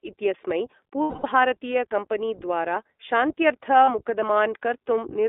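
Speech heard through the iLBC codec, band-limited to roughly 250 Hz to 3.6 kHz. The speech sounds plainly rough and synthetic, which fits 20 ms frames at about 15.2 kbps. Lost iLBC frames cause gaps at 1.02 to 1.26 s (220 ms) and 3.84 to 3.91 s (40 ms). There the decoder repeats the last pitch cycle with noise, giving a held, buzzy vowel before clean speech returns.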